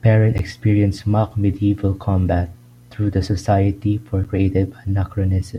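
A speech recording with two sharp ticks, at 0.38 s and again at 4.24 s. These are blocks of digital silence: the signal cuts out and returns with no fade. The first gap lasts about 11.6 ms, which fits a 512-sample buffer. The second is about 8.7 ms. Output buffers not filled in time would leave these zeroed stretches.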